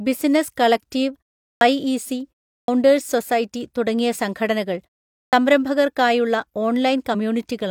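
At 1.51, 2.58 and 5.23 s there's a clipped start after a pause. After "ബിസിനസ് കളക്ടീവ്", just before "സൊസൈറ്റി തുടങ്ങിയ സംഘടനകൾ സംരംഭകർക്കായുള്ള" and after "സൊസൈറ്റി തുടങ്ങിയ സംഘടനകൾ", the output device seems to doze through the short gaps and wakes late, eating about 0.1 s each time. At 7.10 s, damaged data in the compressed stream gives a quick 50 ms blip as the decoder loses sync.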